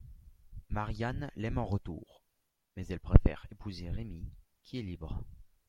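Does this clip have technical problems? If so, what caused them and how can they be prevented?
No, this clip has no technical problems, so there is nothing to trace or prevent.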